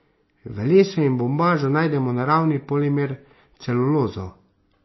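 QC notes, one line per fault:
Throughout, MP3 compression, likely at a low bitrate around 24 kbps: speech dulled, nothing above 5.8 kHz, watery swirl; spectrogram shows hard ceiling and flickering sparse high bins.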